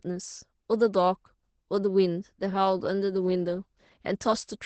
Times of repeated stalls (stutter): none

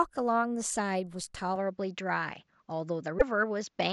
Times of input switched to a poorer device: 1.56-3.92

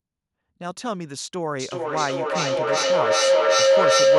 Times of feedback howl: 1.59-4.19

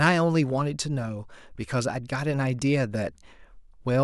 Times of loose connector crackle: none

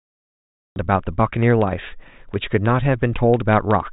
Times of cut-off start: 0.00-0.76

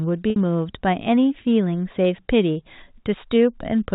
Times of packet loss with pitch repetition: 0.30-0.36

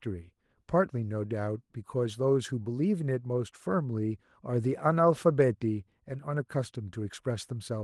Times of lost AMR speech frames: none

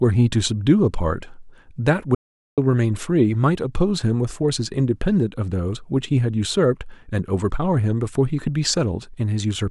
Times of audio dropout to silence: 2.15-2.58

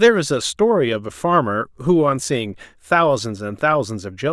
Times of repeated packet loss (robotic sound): none

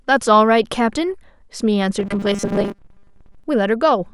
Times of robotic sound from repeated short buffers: 1.99-3.44

